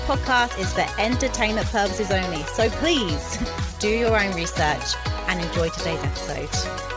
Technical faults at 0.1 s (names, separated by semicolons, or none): none